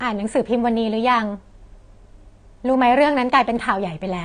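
From start to end, nothing is present above 9.6 kHz. The speech sounds dull. This is low-bitrate audio saved at a high bitrate. An earlier coarse encode, likely around 32 kbit/s, removed that detail. The later high-rate MP3 cannot restore it.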